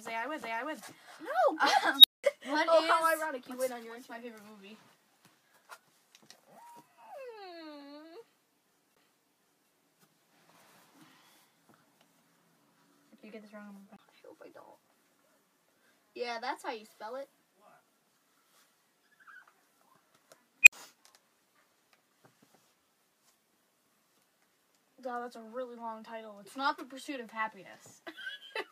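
At 0.42 s the pickup jumps onto a different turn of the disc's spiral, a CD skip. Playback mutes for a few milliseconds with a tick and resumes from another point. The same jump recurs at 8.95 s, with a brief mute, and from 13.96 to 13.99 s, with a mute of about 20 ms.

From 1.98 to 2.24 s an unstable filter runs away as its recursion grows without limit. A tone of around 4 kHz swells over 63 ms, clips, then overflows into 200 ms of silence. From 20.63 to 20.73 s it happens again with a tone of about 3 kHz, a 41 ms build-up and a 60 ms gap.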